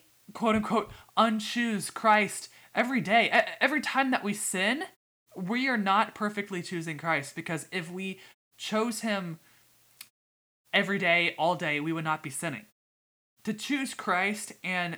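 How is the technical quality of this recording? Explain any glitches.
The recording carries a steady hiss from start to finish, caused by low bit depth with dither. The sound fits roughly 9-bit resolution, with dither added before rounding so the quantisation error becomes even white noise about 35 dB below the speech. Undithered truncation would sound gritty and track the voice. This hiss stays constant and free of distortion, and it vanishes only where muted pauses silence the gaps.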